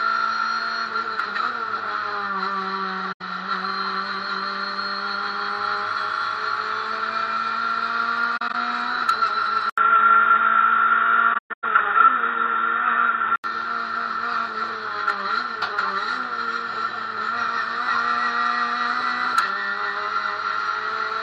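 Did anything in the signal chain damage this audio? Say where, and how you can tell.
Yes. AAC frame loss with muting in the codec stage: soft-edged holes at 3.12 to 3.22 s, scattered through 8.37 to 8.55 s, and 11.33 to 11.64 s. The decoder zeroes the lost spectrum and the overlapping windows fade the sound out and back in, so the edges are faded rather than cut off as a sample-level dropout would be.

From 9.70 to 13.44 s the input was likely switched to a poorer device: an 80 ms silence, nothing above 3.8 kHz, a level change of about 5 dB, and a new noise floor about 45 dB down. That change of tone and noise, not just bandwidth, separates it from a codec low-pass.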